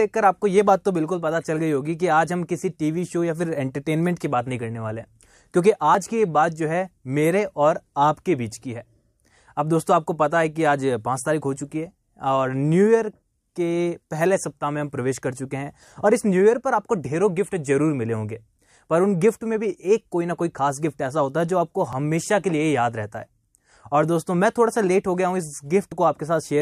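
A tiny click or skip interrupts the sound at 5.95 s, again from 21.93 to 21.95 s, and once more at 25.92 s, each time with the waveform jumping abruptly. This is overlap between stream segments. The audio arrives in 4-second segments whose time stamps overlap, so the player trims the supposed duplicate. Because that sound was never actually doubled, a few milliseconds of real audio, about 20 ms at most, are thrown away at those boundaries.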